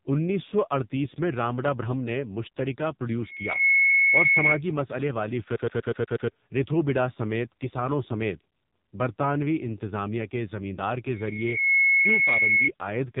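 Speech, passed through an AMR narrowband mobile codec. Nothing above 3.8 kHz survives, and heavy damage makes it buzzy and synthetic, consistent with a low bitrate near 5.9 kbps. A loudspeaker feedback squeal at 2.2 kHz swells from 3.21 to 4.61 s and again from 11.08 to 12.7 s. Each builds within a second to roughly 10 dB above the speech, as a microphone re-amplifies its own loudspeaker.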